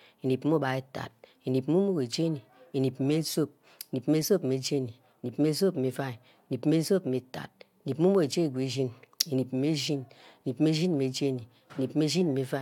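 Nothing technically wrong can be heard in this speech recording, as the signal stays intact and continuous throughout with no audible disturbance at any point.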